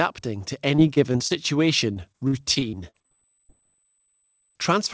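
Repeated packet loss (robotic sound) runs from 0.76 to 1.32 s and again from 1.94 to 3.51 s in this speech. Packets kept failing to arrive, and each hole was patched by stretching the last sound. The speech turns choppy, with short pieces missing. Holes are up to 22 ms in the first stretch and up to 40 ms in the second, about a sixth of each stretch. Throughout, the call audio stops at 8 kHz, which fits G.722.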